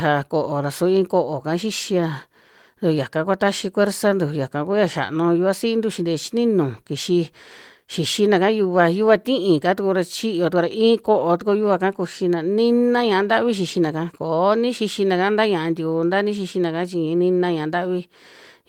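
Nothing stood out on listening to this speech clip.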